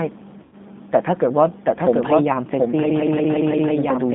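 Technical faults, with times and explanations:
throughout: doubled audio track. A second full-band copy of the speech trails the original by about 0.7 s at about the same level, with no decay or room colour. The likely cause is a second, slower capture path. A spectrogram shows every pattern repeated, shifted right.
throughout: G.729 codec. Nothing passes below about 150 Hz or above 3.7 kHz, so the spectrogram is a sharply bounded strip. The speech sounds rough and synthetic from the sparse pulse excitation, plainly audible damage that fits an 8 kbit/s G.729A coder.
0.43–0.56 s: VoIP packet loss concealed by the speech codec. About 90 ms of audio went missing, which points to three lost packets. The decoder extrapolated from its last pitch and filter with falling gain, and the speech stays weak briefly afterwards. The spectrogram shows a smeared, fading patch.
2.90–3.76 s: system hang loop. 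The same 0.17 s slice of audio repeats five times at 5.86 Hz as a machine-gun stutter, which fits an 8192-sample ring buffer cycling while the system froze. On the waveform, identical blocks repeat end to end.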